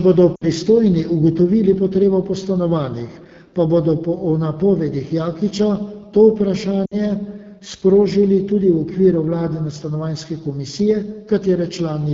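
Throughout the speech, the AMR wideband (HD Voice) codec is plainly audible. The coder models the voice as a pulse-excited vocal tract up to 6.4 kHz and substitutes shaped noise from 6.4 to 7 kHz, and at this quality there are too few bits to track either well. The result is a rough, raspy texture on the speech, which fits the 8.85 kbit/s mode.

From 0.35 to 0.45 s, lost AMR speech frames cause a short break. About 60 ms of coded audio is missing, which fits three consecutive 20 ms frames. The decoder conceals the gap by reusing the last good pitch and vocal tract settings at falling gain, so the sound smears briefly, dips and recovers roughly. The same fault recurs from 6.85 to 7.06 s, again about 60 ms lost, with a similar fade toward near silence before the speech returns weak for a moment.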